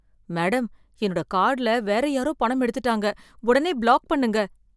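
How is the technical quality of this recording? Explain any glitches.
No glitches or technical faults are audible anywhere in the recording.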